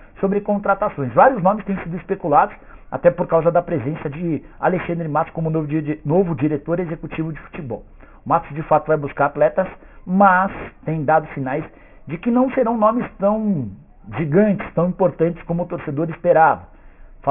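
Aliasing runs throughout. Content above 3 kHz folds back as gritty, unrelated tones about 20 dB down, unlike plain band-limiting's dullness. This fits an unfiltered drop to 6 kHz sampling.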